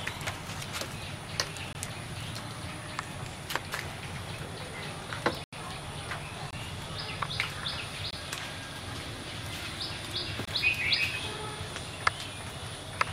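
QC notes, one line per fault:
1.73–1.75 s, block of digital silence: a brief cut-out as the sound drops to silence for about 21 ms, likely an output buffer not filled in time, fitting a 1024-sample block.
5.44–5.53 s, block of digital silence: a short hole of about 85 ms, where the sound cuts to silence and back with no fade, fitting four missed 1024-sample blocks.
6.51–6.53 s, block of digital silence: another brief cut-out from a 21 ms drop to silence, with an abrupt cut and return.
8.11–8.13 s, block of digital silence: the same brief cut-out, a 21 ms stretch of silence whose unfaded edges snap the waveform.
10.45–10.48 s, block of digital silence: a final brief cut-out, 21 ms of silence, matching the other single missed blocks in length.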